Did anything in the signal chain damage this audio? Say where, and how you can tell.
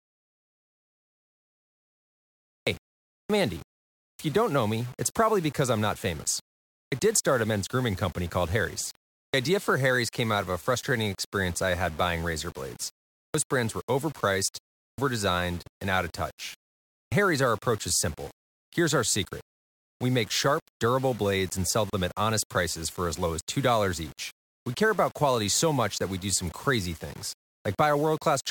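Yes. At sample-format conversion there's grainy distortion that follows the speech throughout and gets gritty on quiet parts. That's likely low bit depth without dither, rounded to about 6 bits.

At playback we get a clipped start after a pause at 2.56, 3.2, 4.1, 6.81, 9.24, 13.25, 14.88 and 17.01 s. Each one loses about 0.1 s while the sleeping output device wakes up.

At the codec stage there's a gap at a join of encoded pieces at 21.90 s, a 33 ms hole in continuous speech. That's encoder delay and last-frame padding left in between separately encoded chunks.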